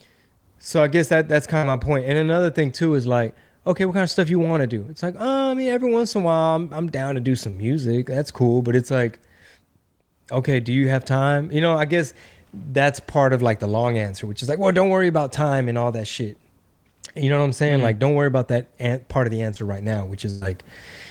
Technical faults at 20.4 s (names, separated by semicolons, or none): burst of packet loss